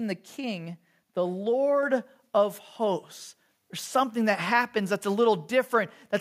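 A speech clip in which the call software judged the microphone too quiet and raised its input volume in a single step, a microphone volume stepped up at 1.83 s, just before "of hosts". Voice and background noise jump together by about 4 dB.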